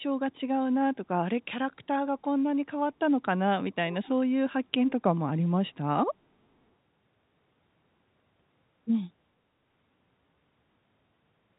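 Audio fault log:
3.91–4.09 s echo leak: a faint copy of the speech returns 447 ms late, about 20 dB down, likely from uncancelled loudspeaker pickup; the spectrogram shows a weak, delayed repeat of earlier harmonics.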